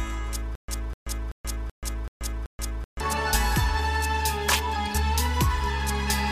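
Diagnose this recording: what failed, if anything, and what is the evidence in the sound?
Stutter with silent gaps, 0.55 to 3.01 s. A 250 ms burst repeats six times, separated by 131 ms silences. Likely a stalled playback buffer replaying its last fragment.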